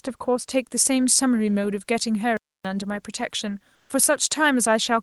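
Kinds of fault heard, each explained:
pre-emphasis left on: From 0.51 s to the end, the treble sits far too high. The sound turns thin, bright and hissy on sibilants. A treble lift was applied before recording or sending, and the matching cut never came afterwards. The tilt here is steep, about 13 dB more at 10 kHz than at 1 kHz. That shape fits the 75 µs curve used for FM broadcast.
playback stall: At 2.37 s the speech stops dead in mid-flow. It stays silent for about 276 ms, then resumes at 2.65 s. The gap is complete silence, not a fade or a dropout of part of the band. The likely cause is the player running short of data, or its audio thread being held up. Output froze until data arrived again.
comfort noise in place of the background: Between 3.75 s and 3.89 s, for about 140 ms, the room background changes character. It becomes a smooth, steady, featureless hiss, about 1 dB quieter than before. 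That background sits about 45 dB below the loud parts. The likely cause is discontinuous transmission in an Opus codec. The sender paused during no speech, and the receiver filled the pause with synthetic noise.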